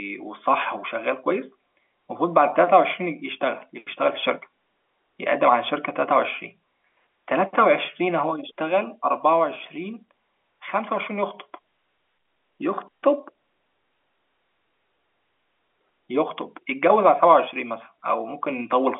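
No technical faults can be heard in this speech recording, which carries the ordinary narrow band of G.711 telephone coding, with sound confined to about 300 Hz to 3.4 kHz and nothing above 3.6 kHz.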